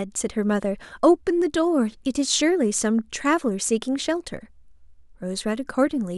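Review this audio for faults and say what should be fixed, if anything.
Nothing here needs fixing. No technical faults can be heard at any point in the speech.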